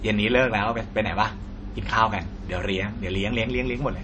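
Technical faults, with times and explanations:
Throughout, MP3 compression: the speech has nothing above 8.3 kHz and a plainly audible watery, swirling texture, with s sounds turning chirpy and metallic. The likely cause is an encoder starved of bits, which fits a low rate near 32 kbps, cutting the treble and dropping weak frequency lines that flicker on and off between frames. A simple low-pass filter would dull the top without this warbling, smeared character.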